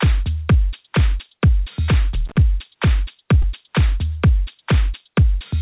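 At 1.86 to 1.90 s there is short concealed packet loss. About 20 ms never arrived, and the receiver extended the preceding sound to fill it, leaving a brief smear. From 2.14 to 2.38 s, loose connector crackle. A bad contact chopped the signal, producing irregular scratchy bursts. At 3.42 to 3.45 s, a second concealed loss leaves a similar short wobble.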